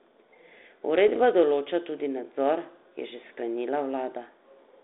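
From 1.08 to 1.17 s, before "določa tudi nadzor je", bit errors on the ADPCM link upset the decoder's step size, causing pops and a rough burst that appear as broadband spectrogram streaks and jagged waveform jumps.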